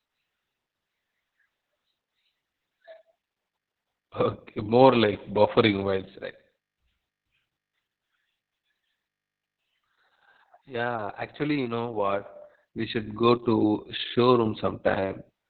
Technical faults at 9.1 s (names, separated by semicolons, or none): Opus voice compression